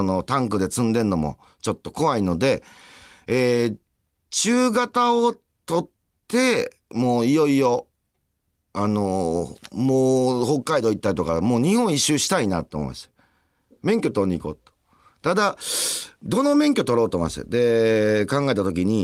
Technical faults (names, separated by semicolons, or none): none